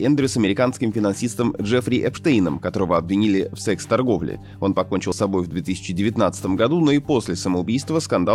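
The audio skips twice, at 2.17 s and 5.12 s, each time losing around 50 ms with the two sides butted together and no gap of silence. The spacing of roughly 3 s points to audio missing between chunks, likely from a recorder handling 3-second blocks and dropping a sliver at each handover. On a waveform, each spot shows an abrupt seam where the envelope jumps, and a spectrogram shows a sharp vertical discontinuity rather than a dark silent band.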